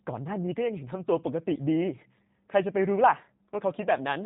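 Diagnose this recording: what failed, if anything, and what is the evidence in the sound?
Codec stage: G.729 rebuilt the speech from sparse pulses, fitting 8 kbit/s, so throughout nothing exceeds 3.8 kHz and it sounds plainly rough and synthetic.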